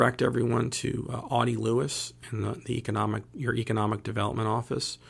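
Nothing to flag: no technical faults can be heard anywhere in the speech.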